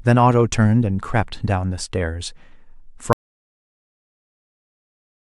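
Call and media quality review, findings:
Audio dropout to silence from 3.13 s to end of clip; speech cuts off into silence, no room tone. Likely input loss or mute upstream of encoder.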